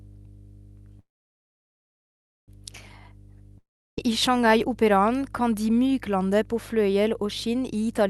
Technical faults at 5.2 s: mains hum

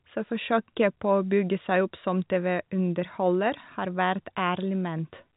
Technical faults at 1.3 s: none

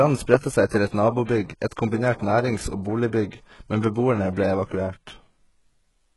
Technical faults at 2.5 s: HE-AAC compression

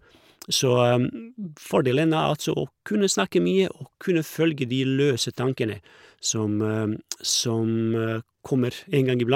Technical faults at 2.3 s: none

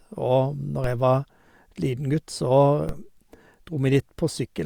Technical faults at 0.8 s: DC step

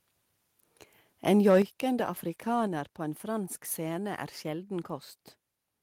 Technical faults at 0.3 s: none

